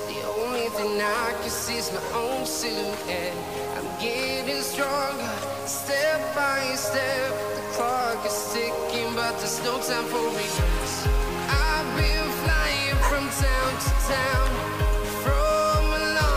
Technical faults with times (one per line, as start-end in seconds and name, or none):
0.00-16.36 low bit depth without dither